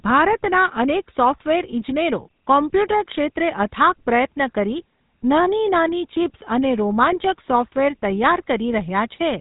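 Speech throughout carries plainly audible GSM full-rate codec damage: a buzzy, gravelly roughness laid over every syllable, with nothing audible above 4 kHz. The grain comes from the codec rebuilding the voice from a vocal-tract model driven by a sparse, regularly spaced pulse excitation, which fits a 13 kbps GSM stream. That pulse-train buzz, rather than the watery, swirling artefacts of a low-bitrate transform codec or the clean dullness of simple band-limiting, marks it as GSM.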